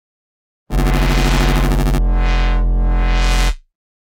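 From the start to about 1.98 s, the sound carries a robotic buzz at 100 Hz that persists only while there is signal. This is buffer tearing. The writing software and the reading hardware have drifted until they cross inside every period of a ring buffer. About a fifth of each 10 ms buffer replays audio from some 40 ms earlier, with hard joins at both edges. That repeating discontinuity produces the rattle.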